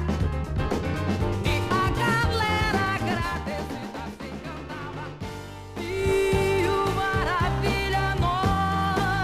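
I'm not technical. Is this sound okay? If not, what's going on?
Yes, nothing here sounds broken. Where the volume rises or falls, it glides gently, the way a hand easing a volume slider would, rather than jumping.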